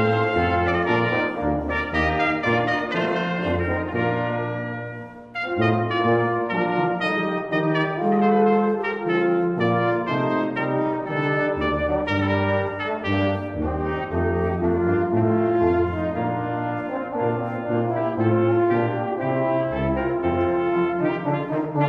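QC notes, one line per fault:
No faults found.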